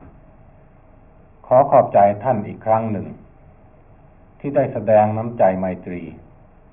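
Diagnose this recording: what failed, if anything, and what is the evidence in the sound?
Nothing stood out on listening, and no stage in the chain gives any audible sign of having failed.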